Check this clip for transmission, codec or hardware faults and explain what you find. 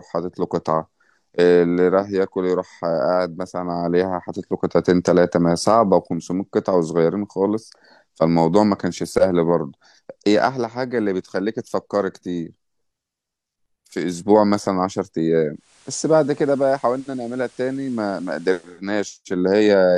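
One fault is present. From 15.53 to 18.83 s, digital radio blending to analogue: losing digital reception, the receiver cross-fades over 275 ms to FM, bringing faint hiss, about 1 dB lower level.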